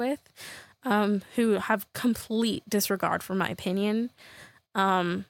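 No technical faults can be heard anywhere in the recording.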